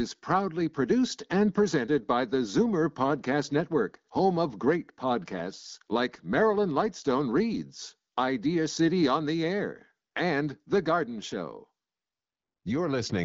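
No technical faults can be heard in this recording.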